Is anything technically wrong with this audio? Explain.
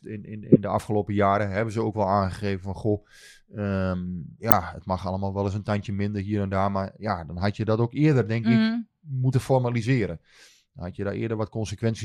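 Yes, there are two spots where a corrupt frame was decoded. The first runs from 0.52 to 0.58 s and the second hits at about 4.50 s. In both, flipped bits inside compressed frames got played anyway, so misread gains and codes dumped energy at the wrong frequencies. That comes through as a short chirp, squeak or burst of noise that cuts across the speech. The first spans a few frames' worth and the second is briefer.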